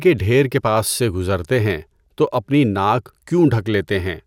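Speech, with DAB burbling from 1.82 to 2.11 s: bit errors, at roughly 0.5%, slip past the error correction across 14 frames and make single sub-bands jump in level, rather than giving the silence of a dropout.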